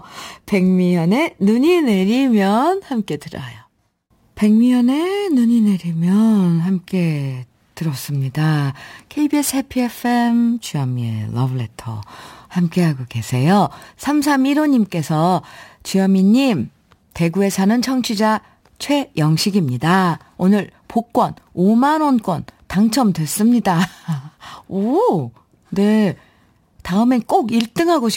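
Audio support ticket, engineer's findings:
Crude rate conversion, throughout. Gritty inharmonic fizz riding louder, brighter speech. Samples repeated without filtering, which fits a 44.1 to 48 kHz conversion. Error roughly 30 dB down.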